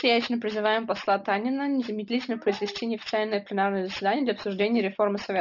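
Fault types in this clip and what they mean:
aliasing: Sibilants sound gritty and metallic throughout, with folded tones roughly 15 dB below the speech, from downsampling without filtering, mirroring content around 6 kHz, which fits a 12 kHz rate.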